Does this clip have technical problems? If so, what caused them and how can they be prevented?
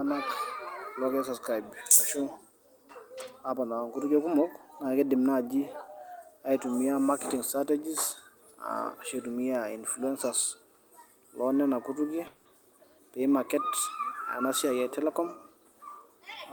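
Yes. From 12.27 to 12.47 s, a long network dropout likely stopped packets arriving; the receiver covered 180 ms with a fading buzz, losing that speech. A steadier connection, forward error correction or redundant packets would help prevent this.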